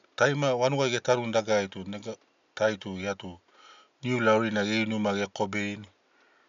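No technical faults can be heard anywhere in the recording. A faint room noise sits about 41 dB below the speech, part of the space where the microphone was rather than anything the system added.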